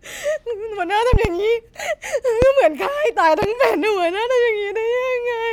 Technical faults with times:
1.13-1.29 loud pop
2.42-2.46 loud pop
3.42-3.46 loud pop

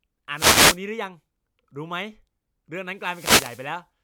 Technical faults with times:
0.34-0.79 wireless microphone noise hit
2.94-3.78 wireless microphone noise hit

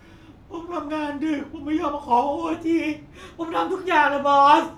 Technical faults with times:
2.53-4.77 wrong sample rate

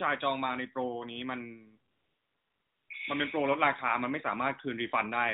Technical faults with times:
1.92-2.90 AMR comfort noise

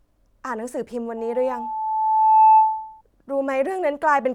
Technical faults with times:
1.17-3.01 loudspeaker feedback squeal

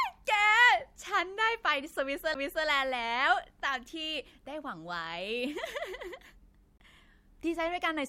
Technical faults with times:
2.34 CD skip
6.78-6.80 CD skip

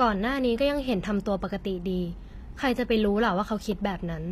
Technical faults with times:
0.00-4.32 HE-AAC compression

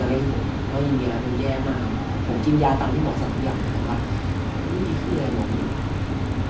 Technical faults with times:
3.22-6.50 resampler restarted on every block

